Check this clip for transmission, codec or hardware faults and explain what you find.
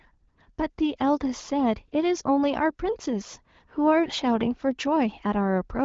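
No faults found; the wideband codec stops near 7 kHz.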